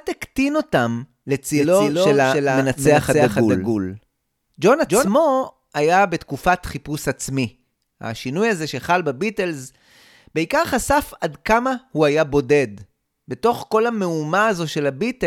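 From 1.54 s to 5.08 s the speech carries a doubled audio track: a second, full-band copy of the same speech runs roughly 300 ms behind the original, about 5 dB quieter. It has no decay or room colouring, so it reads as a distinct repeat rather than reverberation, and it cuts in and out abruptly at both ends. The likely cause is the signal being picked up twice, once through a slower path.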